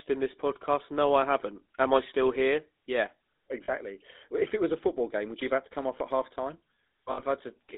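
GSM full-rate codec, throughout the clip: the speech has been squeezed through a coder that models the vocal tract and drives it with coarse, regularly spaced pulses, which fits the 13 kbps full-rate scheme. The line passes roughly 250 Hz to 3.7 kHz, so the lows and everything above are gone. The codec damage is plainly audible as a buzzy, gravelly roughness on the speech.

Lost GSM frames, 3.64 to 3.71 s: for about 40 ms, which points to two missing 20 ms frames, the decoder repeats the last good frame's settings. The sound briefly hangs on a rough, metallic ring instead of moving on.

Lost GSM frames, 7.12 to 7.21 s, right after "off at half time": a longer gap of about 60 ms, suggesting three frames, is covered the same way. The held sound rings metallically across the gap.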